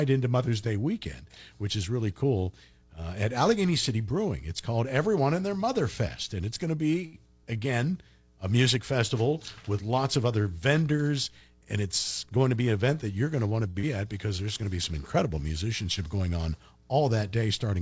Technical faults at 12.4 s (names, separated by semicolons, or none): jitter buffer speed-up